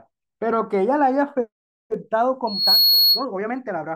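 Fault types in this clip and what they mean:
Loudspeaker feedback squeal: A microphone is hearing the loudspeaker it drives, and at one frequency the loop returns more than it sends, so that tone keeps growing. In this speech clip a single pure tone near 4.3 kHz appears at 2.47 s. It swells over roughly a third of a second into a squeal. It sits about 5 dB above the speech. It stops at 3.25 s.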